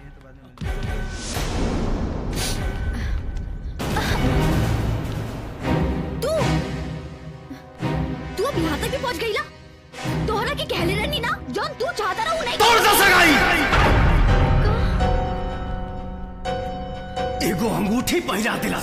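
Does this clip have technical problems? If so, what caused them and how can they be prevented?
Yes. Audio missing between chunks causes two short skips, at 9.12 s and 14.09 s, each dropping about 30 ms with the edges butted together. The 5 s spacing likely reflects a recorder losing samples at each chunk boundary. Overlapping or double-buffered chunk handoffs would prevent it.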